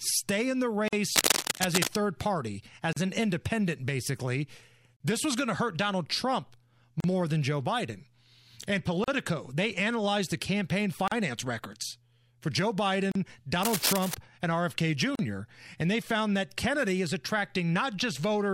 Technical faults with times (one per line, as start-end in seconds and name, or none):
0.88-0.93 gap at a join of encoded pieces
1.15-1.88 cable scratch noise
2.93-2.97 gap at a join of encoded pieces
4.97-5.00 gap at a join of encoded pieces
7.00-7.04 gap at a join of encoded pieces
9.04-9.08 gap at a join of encoded pieces
11.08-11.12 gap at a join of encoded pieces
13.12-13.15 gap at a join of encoded pieces
13.63-14.15 cable scratch noise
15.15-15.19 gap at a join of encoded pieces